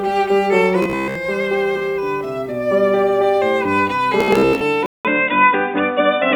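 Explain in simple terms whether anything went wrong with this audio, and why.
Two things went wrong in this music.

From 0.83 to 1.17 s, and again from 4.21 to 4.61 s, there is robotic sound from repeated short buffers. The music turns into a stiff, metallic buzz at about 66.8 Hz. Most of the sound there is a tiny slice, about 15 ms long, played over and over. The likely cause is new audio arriving too late.

At 4.86 s the input switched to a poorer device. The sound drops out for about 0.19 s. Then it comes back duller, with a faint new hiss and a slight change in loudness. This lasts to the end. The likely cause is the recording jumping to a weaker microphone.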